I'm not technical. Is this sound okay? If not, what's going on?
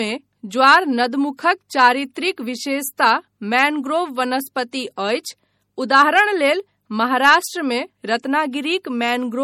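No. The speech was likely squeezed by MP3 compression, which saves space by discarding detail it judges unimportant. Here that is plainly audible: a watery, swirly quality throughout, smeared sharp sounds, and nothing above about 18.3 kHz, so the very top sparkle is gone.

The same compression also causes pre-echo. It spreads its noise across short chunks of sound, so noise meant for a sudden loud moment leaks into the quiet just before it. You hear a brief hiss, about 14 to 21 milliseconds long, ahead of sharp sounds at 1.37, 2.97 to 2.99, 4.71 and 5.23 seconds, and those sounds land softer and blurrier.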